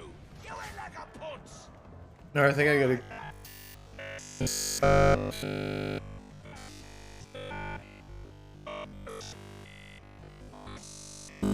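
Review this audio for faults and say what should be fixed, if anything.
From 3.03 s to 11.53 s the sound goes robotic, a rigid metallic buzz at 50 Hz: robotic sound from repeated short buffers. The output is likely starved of new audio and keeps replaying its last 20 ms chunk practically nonstop, so that loop length fixes the buzz rate. To prevent it, give the audio path enough buffering and thread priority that fresh data always arrives before the device needs it.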